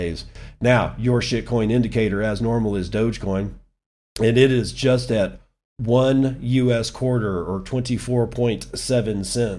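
Nothing in this recording trips any alarm, with no technical faults turning up anywhere along the way.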